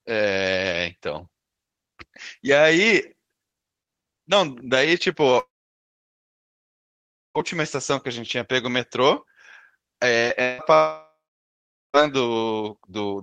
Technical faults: long network dropout; short concealed packet loss

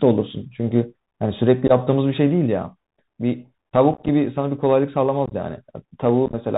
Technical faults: Bluetooth CVSD headset codec; unconcealed Bluetooth headset packet loss

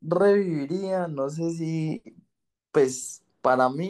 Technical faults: none

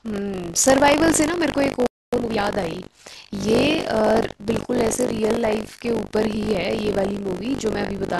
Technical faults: buffer tearing; playback stall; time-compressed catch-up

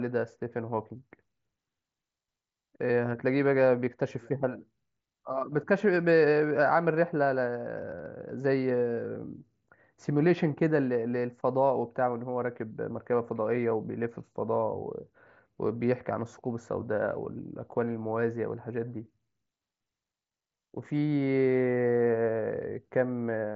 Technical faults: none

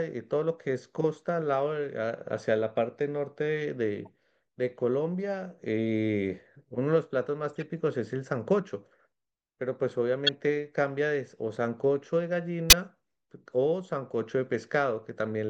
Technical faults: corrupt frame decoded

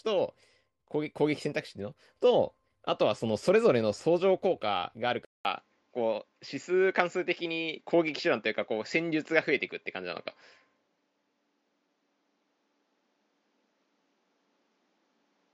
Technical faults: input switched to a poorer device

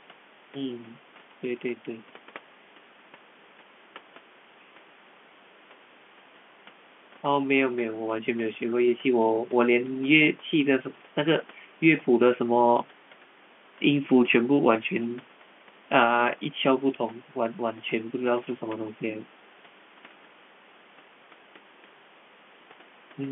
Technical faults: none

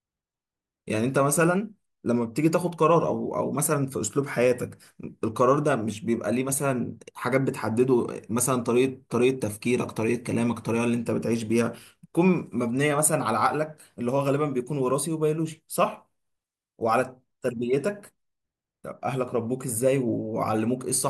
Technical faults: none

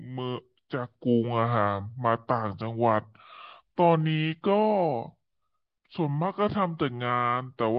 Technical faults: wrong sample rate

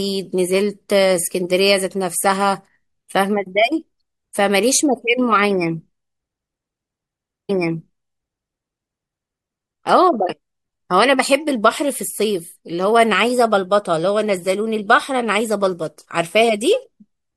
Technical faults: stream segment repeated

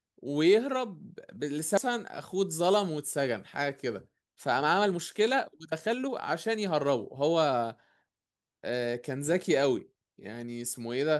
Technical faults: skip ahead; jitter buffer speed-up

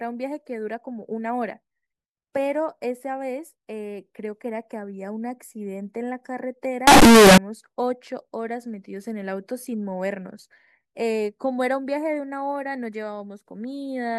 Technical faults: float read as integer

